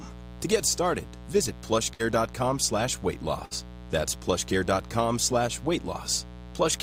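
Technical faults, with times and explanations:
Throughout, mains buzz: a steady, raspy buzz built on 60 Hz and its harmonics sits under the speech at a fairly high level, roughly 15 dB below it. Sharp switching spikes twice per mains cycle, from a dimmer, rectifier or poor shielding, spread energy up into the kilohertz range.
1.93 to 2.01 s, burst of packet loss: just after "get started visit", about 60 ms of audio never arrived. The receiver extended the last sound for about 58 ms, fading it down into a held buzz or hiss, then playback resumed at "slash weight" with the gap skipped.
3.45 to 3.53 s, burst of packet loss: after "slash weight", the same pattern repeats, with about 60 ms lost and roughly 56 ms covered by a fading continuation of the preceding sound before normal playback picks up again further along, leaving that section missing.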